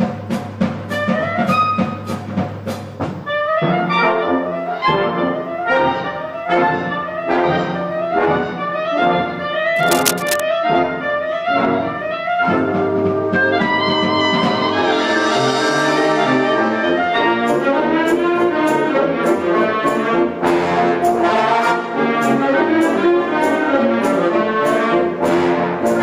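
A worn cable, connector or control was likely moved between 9.76 and 10.41 s, and its contact resistance fluttered rapidly while it shifted. That unstable contact injects cable scratch noise: dense, irregular bursts of crackle laid over the sound for roughly two-thirds of a second. The bursts sit only a few decibels below the programme, so the scratching and rustling stands out clearly on top of the audio rather than hiding beneath it.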